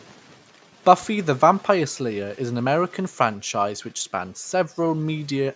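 No technical faults can be heard in this speech. It has passed through a call's microphone processing, which trims the lowest bass and leaves nothing above 8 kHz.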